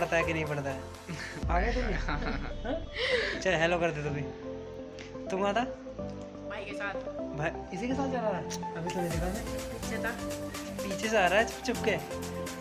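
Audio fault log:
Nothing stood out on listening to this audio.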